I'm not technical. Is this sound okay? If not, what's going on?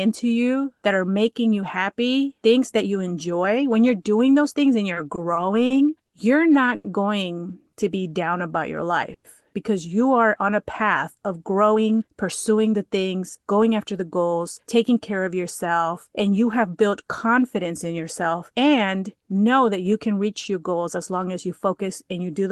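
No, the sound has several problems, all from delays as the speech traveled over a call connection.

From 4.93 to 6.15 s there are repeated stalls (stutter). The audio kept arriving late. Five times, the receiver held the last sound to fill the wait, for 180 ms in all. The longest hold is 70 ms. Nothing is lost, but the speech catches and drags.

At 6.75 s there is a short stall from a late packet. One piece of audio came late. The receiver stretched the sound before it for 90 ms, then carried on from the same spot. You hear a sound held slightly too long.

From 7.39 to 8.92 s there is a jitter buffer slow-down. The receiver was low on stored audio. It repeated tiny slices of sound to build a reserve. The speech plays at about 92% speed, at normal pitch, and is 132 ms longer.

From 9.14 to 9.27 s there is a call audio freeze. The last sound carries on briefly, then there are 70 ms of silence, 110 ms in all. 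Then the speech resumes where it stopped. The likely cause is audio held up on its way.

From 11.44 to 14.97 s there is a jitter buffer speed-up. The receiver held more audio than it aims for. The receiver trimmed tiny slices to catch up, about a third of a second in all. The speech plays at about 108% speed and sounds hurried.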